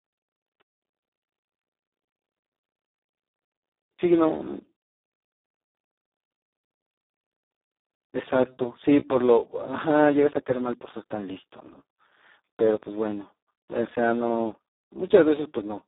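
From start to finish the speech carries heavy Speex codec damage, which fits a rate near 4 kbps, with almost no bits left to code the excitation. Voices turn noisy and hoarse, and the sound stays inside a telephone-like 250 Hz to 3.7 kHz band with nothing above 3.8 kHz. The top is missing, not filled with hiss, and that sets it apart from a wideband Speex mode.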